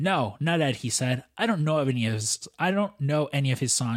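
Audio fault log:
Nothing to log here, as the speech comes across without any fault turning up along the way.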